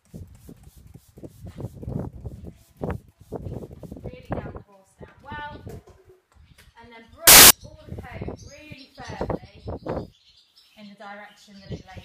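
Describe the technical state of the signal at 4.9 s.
The signal at 4.9 s is intact, with no dropout, distortion or other fault present at that moment.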